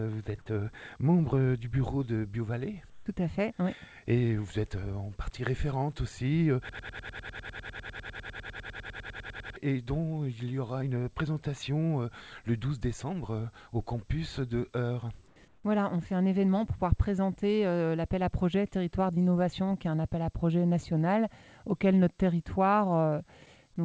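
Throughout the clip there is channel delay, heard as comb filtering. One channel runs a tiny fraction of a millisecond behind the other, a few samples at most. When the two combine, the shared content cancels at evenly spaced frequencies. The first notch sits around 5 kHz. The top end sounds hollow and phasey, with fixed dips that never move.

From 2.90 to 3.06 s, comfort noise takes the place of the background. For 160 ms the real room sound gives way to a smooth, featureless hiss about 5 dB quieter. The likely cause is discontinuous transmission. The sender judged the input silent and stopped sending. The receiver filled the gap with synthetic noise shaped roughly like the background.

From 6.69 to 9.56 s there is a broken-record loop. A fragment of about 0.1 s repeats back to back, 29 times, giving a rapid stutter for almost three seconds. Whatever should have played in that stretch is gone. 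The likely cause is a stall in the player or stream, which kept resending its last fragment.

Comfort noise returns twice more. From 15.28 to 15.36 s, 80 ms of background becomes flat hiss about 2 dB lower. From 15.48 to 15.64 s, 160 ms is replaced, about 3 dB lower. Each time the background turns briefly grey and lifeless. Then the real background comes back.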